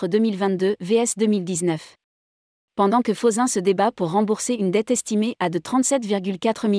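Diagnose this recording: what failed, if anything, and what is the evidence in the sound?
Nothing failed: no stage of the chain leaves any fault to hear in this recording.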